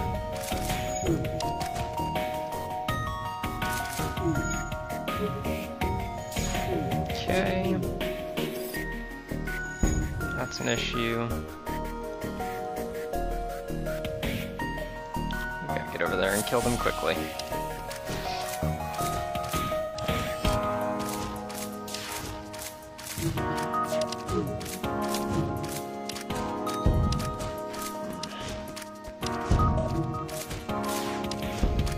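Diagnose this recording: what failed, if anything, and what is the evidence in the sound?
AAC frame loss with concealment: lost codec frames were rebuilt from the last good spectrum, smearing the sound at 19.81–20.00 s, 25.44–25.49 s and 29.78–29.86 s.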